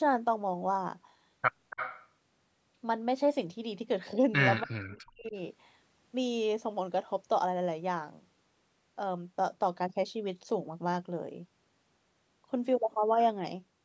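From 1.7 to 2.08 s, a faint second copy of the speech trails the original. It arrives about 284 ms late and sits roughly 10 dB below the direct voice. This is likely an echo leak. The far end's echo canceller did not fully remove what its microphone caught from the loudspeaker, so part of it came back down the line.

Between 4.63 and 5.36 s, the speech suddenly sinks and breaks up. For around 0.7 s it dips, falling by as much as roughly 40 dB at its deepest. Then it recovers. This points to speech suppressed in double talk. Both sides were likely talking at once. The echo canceller could not tell the talker from loudspeaker echo, so it turned everything down, including the voice. The call microphone processing caps the audio at 8 kHz throughout.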